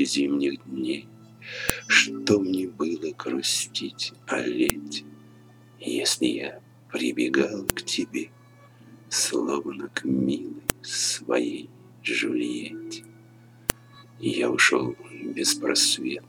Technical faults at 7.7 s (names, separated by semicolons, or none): file header played as audio